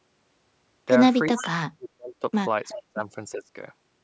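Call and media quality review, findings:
Speech suppressed in double talk, 1.29–2.24 s, 2.76–3.02 s, 3.31–3.51 s. The voice dips or cuts out in pieces, deepest about 35 dB in the first stretch, about 25 and 20 dB later. Likely the echo canceller ducking the near talker while the far side speaks.

Echo leak, 1.36–1.44 s and 2.68–2.79 s. Short delayed copies of the voice trail by 371 ms, about 20 dB under the speech. Likely residual loudspeaker echo passing the far end's canceller and returning. Bandwidth tops out at 8 kHz.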